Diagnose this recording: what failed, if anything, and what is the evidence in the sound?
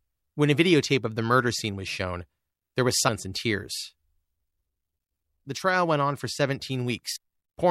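Codec stage: compressed frames skipped. At 3.07 s, between "was shown there was" and "and tears", the speech jumps ahead roughly 150 ms. At 7.15 s it jumps roughly 300 ms. The jumps fit whole 26.1 ms frames going unplayed, and overlapping frames smear each join into a brief blip.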